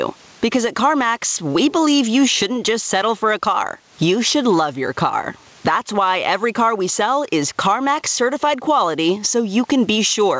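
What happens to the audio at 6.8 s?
At 6.8 s the audio shows gain pumping, present across the whole clip. The likely cause is gain set far too high with a fast limiter clamping each loud sound, so the gain swings by roughly 15 dB, leaving speech squashed.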